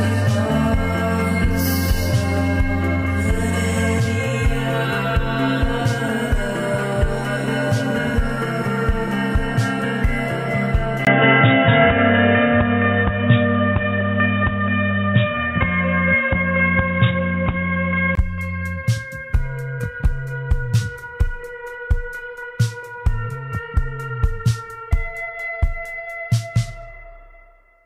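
Between 11.05 and 18.17 s the audio turns dull and boxy, with nothing above 3.8 kHz, a 20 ms gap at the switch, a new noise floor roughly 30 dB down and a level shift of around 5 dB. The likely cause is the input switched to a poorer device.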